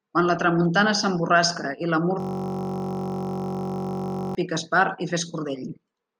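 From 2.20 to 4.35 s, after "tramuntana s'emborrasca i la", a steady 47 Hz buzz replaces the speech: a system hang loop, replaying one 21.33 ms buffer (likely 1024 samples) until "pica espart".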